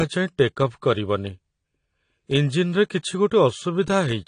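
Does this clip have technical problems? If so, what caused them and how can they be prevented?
Yes. All the way through there's plainly audible codec damage: nothing above 10 kHz, and sibilants come out dull, smeared and fizzy. That's likely AAC compression, with AAC-LC at a low bitrate, around 32 kbps, discarding highs and thinning bands. Encode at a higher bitrate to prevent it.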